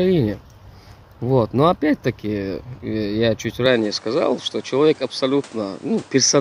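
From 3.66 s to the end, the sound abruptly loses everything above 10.3 kHz and gains a new background noise roughly 30 dB below the signal, with no gap and no level jump: likely an input switched to a poorer device. The fresh noise floor arriving with the narrower band separates it from a simple filter change.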